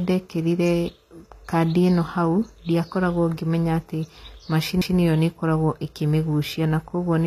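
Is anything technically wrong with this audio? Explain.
Yes. Two faults are audible. Throughout the speech, the sound bears the marks of HE-AAC compression, likely from low-bitrate encoding: the treble is rebuilt from copied lower bands, so sibilants come out gritty and metallic, and nothing is present above 14.9 kHz. The damage is plainly audible and fits a bitrate of about 24 kbps.

At 4.81 s there is a CD skip. A disc flaw or knock sent the laser to a different turn of the spiral, so the player muted very briefly and resumed elsewhere. This is heard as a short tick followed by an abrupt jump in the speech.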